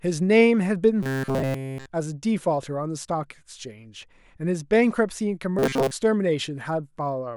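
Speech clip with two stretches of robotic sound from repeated short buffers, at 1.03 to 1.86 s and 5.59 to 5.91 s. Both carry a rigid metallic buzz at 134 Hz, a period of about 7.5 ms. The first is entirely buzz; the second keeps some natural sound beneath it. The likely cause is audio arriving too late, so playback loops the last short block while the real material is lost.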